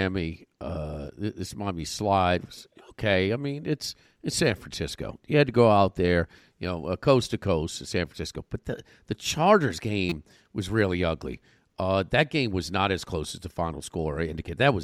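Speech, with a repeated buffer from 10.10 to 10.12 s: one 5.8 ms slice, which fits a 256-sample buffer, plays four extra times, making a brief buzz rather than a gap. Unlike a dropout, nothing goes silent, yet about 20 ms of audio is lost.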